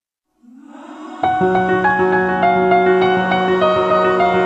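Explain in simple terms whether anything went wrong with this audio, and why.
Nothing went wrong here; the audio runs along steadily with no glitches, dropouts or odd noises to point to.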